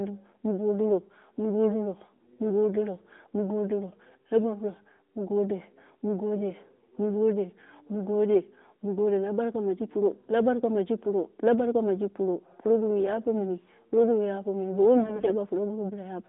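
From 14.98 to 15.34 s the speech suffers AMR bit errors. Through this narrowband mobile-codec path (audio confined to roughly 200 Hz to 3.7 kHz), damaged frames still decode, so pitch and loudness hold while the sound turns hoarse, scratchy and gargly. The misplaced excitation pulses and garbled gain and spectral values break up the harmonic stripes on a spectrogram into ragged noise below 3.7 kHz. The waveform envelope barely changes.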